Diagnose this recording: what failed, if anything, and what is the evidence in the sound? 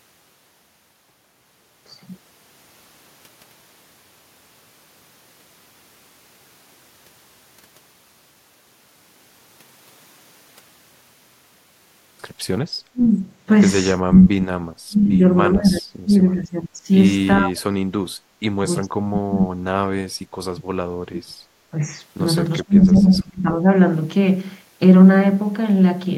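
From about 12.9 s the speech starts sinking and breaking up in stretches: 12.92–13.26, 14.02–16.8, 17.38–17.78, 18.28–20.64, 21.06–21.82 and 22.65–23.66 s, sometimes dropping by roughly 40 dB, close to silence. The stage is call processing, and the likely cause is speech suppressed in double talk: the echo canceller, unable to tell this talker from the far end's loudspeaker echo, attenuates everything whenever both sides speak.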